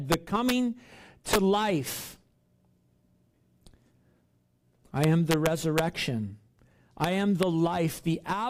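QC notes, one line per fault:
0.12–0.50 s and 5.04–5.79 s: integer overflow. Loud speech peaks pushed about 2 dB past full scale wrap to the opposite sign instead of limiting, so each crest becomes a full-range jump heard as harsh cracking, sharper than clipping.
1.33–1.36 s, 7.04 s, 7.43 s: integer overflow. Brief cracks where peaks overshoot by about 5 dB, about 1 dB, and just at the limit, each flipping polarity across the whole range.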